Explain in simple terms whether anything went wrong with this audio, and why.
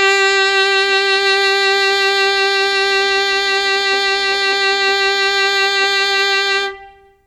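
WMA compression damage runs through the whole music clip, from start to finish, and it is plainly audible. The sound has a ringing, washy quality, with a hiss that swells and fades along with the music. This was likely caused by saving the audio as Windows Media Audio at a small file size. To save space, the encoder blurs detail over short stretches of time and throws away quiet parts, including everything above about 15 kHz.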